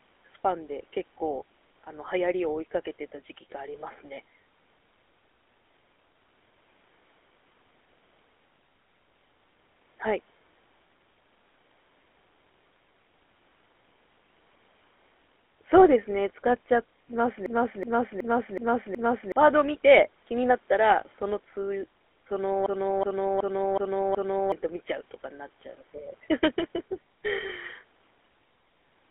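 Throughout, the speech carries plainly audible GSM full-rate codec roughness, a buzzy, gravelly texture from pulse-excited vocal-tract coding, band-limited to about 250 Hz to 3.5 kHz. From 17.46 to 19.32 s and again from 22.66 to 24.52 s, a system hang loop repeats one 0.37 s segment five times at 2.69 Hz, a skipping-record stutter consistent with a 16384-sample buffer, and each time about two seconds of speech is lost.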